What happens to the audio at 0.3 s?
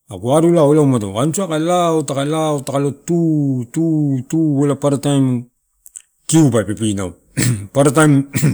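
Nothing goes wrong at 0.3 s; the speech there plays through intact, with no dropout, click, distortion or other fault.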